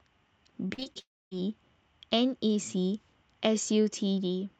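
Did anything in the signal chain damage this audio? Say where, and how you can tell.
Yes. Repeated packet loss (robotic sound) runs from 0.67 to 0.97 s. Across that 0.3 s the audio turns choppy, with pieces missing. There are five separate holes, the longest about 41 ms, and together they account for roughly 120 ms, about 40% of the stretch. This is a network-stage fault. Each time packets failed to arrive, the receiver stretched the last decoded sound to cover the gap. With holes landing this close together, the patches follow one after another and break the sound up.

A long network dropout follows almost immediately, from 0.99 to 1.33 s. The sound first carries on as a fading continuation of the last sound and then drops to silence for about a quarter of a second before the audio resumes, with nothing of the missing stretch recovered. The likely cause is a burst of lost or badly delayed packets on the network. 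The receiver's concealment extended the final sound until it faded out, and playback picked up again once new audio arrived.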